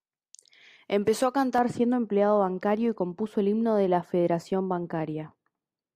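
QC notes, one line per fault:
1.58–5.95 s, de-emphasis applied wrongly: from about 1.58 s to the end, the speech goes dull and muffled, like a blanket got thrown over it. A treble cut meant to undo pre-emphasis has landed on audio that never had any boost, or has been applied twice, so the top end just rolls off smoothly with nothing to cancel it. By 10 kHz it's sitting about 11 dB down relative to 1 kHz, which is why the consonants lose their edge.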